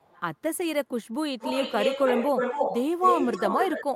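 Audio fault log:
1.39–2.76 s, echo leak: a second copy of the speech trails the original by about 272 ms and is roughly as loud as the direct sound, so each syllable seems to be answered by a ghost of itself. The likely cause is a far end listening on a loudspeaker whose echo canceller failed to subtract what its microphone picked up from that speaker. The uncancelled pickup was sent back down the line, arriving after the round-trip delay.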